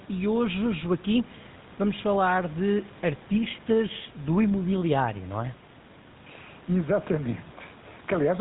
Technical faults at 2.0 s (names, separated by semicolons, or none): GSM full-rate codec